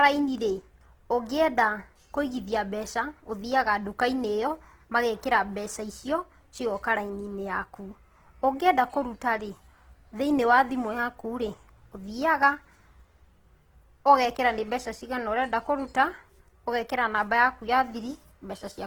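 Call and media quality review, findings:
Opus compression artefacts, whole clip, speech. Grainy, rough texture on voiced sound; tonal parts turn noisy rather than swirly. Likely cause: Opus encoder in CELT (music) mode, starved of bits. Band energies are kept but the detail inside them is filled by folding and noise. Damage plainly audible, consistent with a rate around 16 kbps. Bandwidth still fullband, content up to about 20.1 kHz, no low-rate narrowing.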